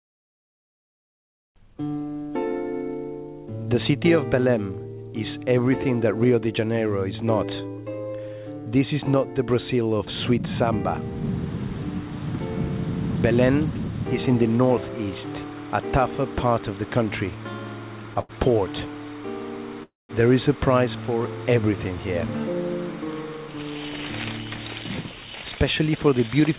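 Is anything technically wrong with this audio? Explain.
Yes. The audio has three faults, all from the jitter buffer of a call link. Its band stops at 4 kHz, which fits a G.711 mu-law call codec.

From 18.21 to 18.31 s there is a short stall from a late packet. A packet arrived late and the jitter buffer ran dry. The receiver stretched the last sound for about 80 ms until the packet came. Playback then resumed from the same point, so nothing is lost. The sound holds too long, with a faint buzz or dip, and everything after it runs 80 ms later.

From 19.83 to 20.11 s the call audio freezes. The likely cause is packets held up in transit, leaving the buffer empty for longer. The receiver filled 260 ms. The last sound carries on briefly as a fading buzz or hiss, then about 190 ms of it is silence. When the audio returns it picks up where it stopped. Nothing is missing, but a gap has been inserted and the delay grows by 260 ms.

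From 25.64 to 26.49 s there is a jitter buffer speed-up. The buffer held more audio than its target. To cut the delay, the receiver removed many short slices, each one or a few pitch periods long, about 50 ms in total. The sound plays at about 106% speed with unchanged pitch. It comes across as slightly hurried.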